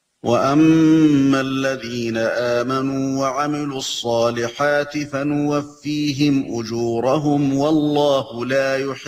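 Nothing stood out as a technical fault on listening.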